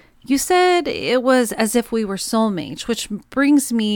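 Listening through the speech, nothing stood out at any point.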